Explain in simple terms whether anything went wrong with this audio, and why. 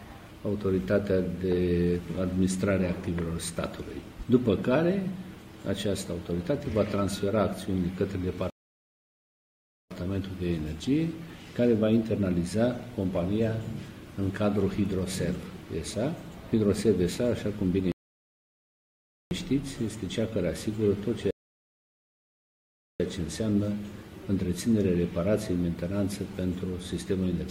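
Three times the sound drops into silence and then carries on exactly where it left off: from 8.5 to 9.91 s, from 17.92 to 19.31 s, and from 21.31 to 23.0 s. Each gap lasts about 1.4 to 1.7 seconds. These are rebuffering stalls. The player used up the audio it had already downloaded, so it paused and waited for more to arrive. Nothing is missing afterwards, but the pauses make the clip run longer.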